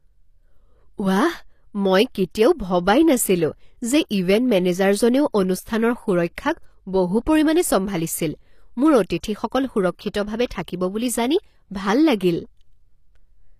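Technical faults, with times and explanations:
Throughout: HE-AAC compression, likely; treble is rebuilt from lower bands, so sibilants sound gritty and metallic, with nothing above 14.9 kHz, fitting roughly 24 kbps.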